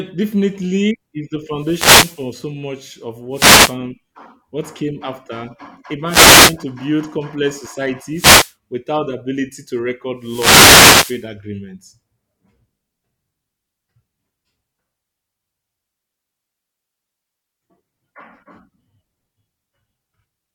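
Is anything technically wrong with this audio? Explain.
Yes. Wireless microphone noise hits occur at 1.56–2.34 s, 3.31–3.77 s, 6.05–6.58 s, 8.11–8.54 s and 10.19–11.28 s. The analogue FM radio link from the microphone fades as reflected signals partly cancel the direct one, so the receiver's own noise rises over the weakened carrier. Each hit sounds like a brief swish or burst of static over the speech, the longest lasting about a second near 10–11 s.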